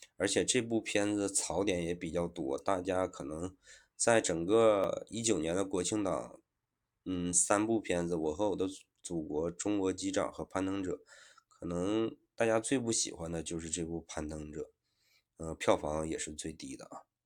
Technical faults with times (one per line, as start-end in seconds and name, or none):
4.84 dropped buffer (overrun)
16.16 dropped buffer (overrun)